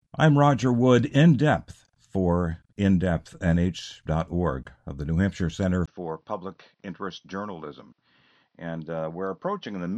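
At 5.86 s a gap of about 20 ms interrupts the speech, and from there to the end the sound is duller and boxier, with nothing above about 6.1 kHz. The level falls by roughly 10 dB and a faint new background noise, around 50 dB below the speech, appears. This is likely an input switched to a poorer device in mid-recording, such as a narrower-band microphone or headset call profile, with its own tone, gain and noise.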